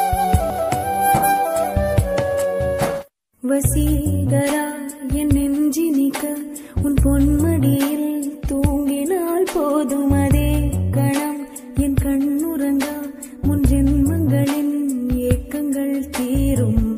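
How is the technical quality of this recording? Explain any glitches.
The technical quality of the recording holds up, with no glitches to explain.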